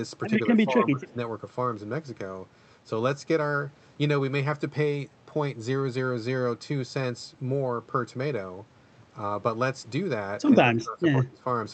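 From 0.51 to 1.19 s the speech dips by about 15 dB, and from 10.64 to 11.46 s it sinks by about 20 dB. This is likely speech suppressed in double talk: the echo canceller couldn't separate the talker from the other side's echo and turned both down.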